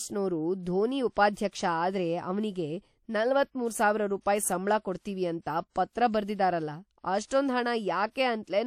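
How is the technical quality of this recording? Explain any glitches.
Two short codec glitches appear near the end of the speech. Pre-echo at 7.27 to 7.31 s and 8.11 to 8.16 s: block-wide quantisation noise leaks ahead of sharp attacks, leaving short hiss for 38 and 44 ms and softened onsets.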